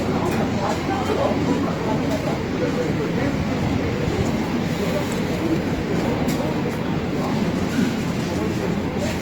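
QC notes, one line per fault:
Throughout, Opus compression: the sound turns grainy and rough, likely from a low bitrate around 24 kbps in music mode, where sparse bands are refilled with noise.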